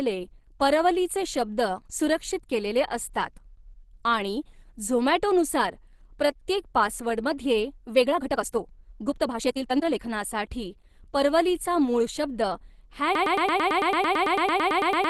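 Right from the start the whole clip carries Opus compression. The speech sounds grainy and a bit hoarse, with plainly audible codec damage, and nothing reaches above about 12.1 kHz. That narrowed top and rough texture fit Opus running in its hybrid mode at a low rate, roughly what you'd expect around 16 kbps. The encoder is likely short of bits and padding bands with folded or noisy content instead of clean detail.

From 7.91 to 10.03 s there's a time-stretched section. The pace suddenly jumps to about 1.59 times normal speed, yet the pitch doesn't rise, so it sounds choppy and rushed. That's the signature of software squeezing the audio to fit a shorter length, most likely by dropping short pieces and splicing the rest together. Then normal pace returns.

At 13.15 s a broken-record loop kicks in and runs right to the end. A fragment of about 111 ms repeats back to back, around eighteen times, giving a fast stutter. 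Whatever should have played in those last couple of seconds is simply gone. It sounds like the player or stream likely stalled and kept resending the last chunk it had buffered.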